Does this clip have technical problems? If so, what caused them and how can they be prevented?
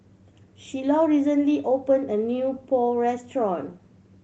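No, nothing in this speech clip points to a technical problem. The Opus voice compression is audible only as a light coding texture across the full band, which fits the hybrid mode at around 24 kbps.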